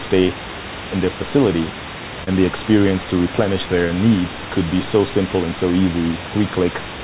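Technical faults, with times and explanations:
2.24–2.29 s, short concealed packet loss: 20 ms of audio missed the decoder, so the receiver continued the preceding sound for 27 ms, leaving a brief smear.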